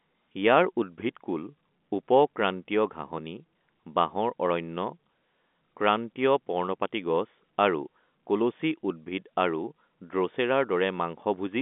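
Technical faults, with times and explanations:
No technical faults are audible anywhere in this recording.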